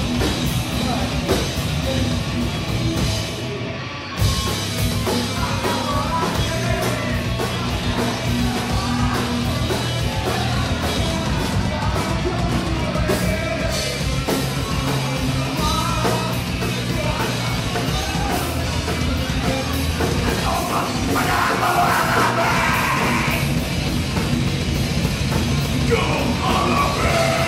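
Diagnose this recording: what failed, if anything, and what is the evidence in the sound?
Nothing in the signal chain points to a failure: no stage shows any dropout, discontinuity, clipping, timing error or other defect at any point.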